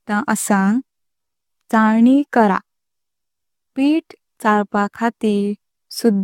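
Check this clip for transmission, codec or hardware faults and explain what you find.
One fault runs through the whole clip. The speech sounds swirly, hollow and smeared, with blurred consonant attacks and nothing above 17 kHz. This is likely generation loss: repeated lossy re-encoding, consistent with about seven passes of AAC-LC at around 96 kbit/s, each quantising on a shifted frame grid.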